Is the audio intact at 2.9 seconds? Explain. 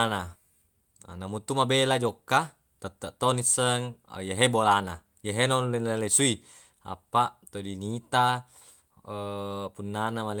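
Yes, the audio is intact at 2.9 seconds, with no fault present at that moment.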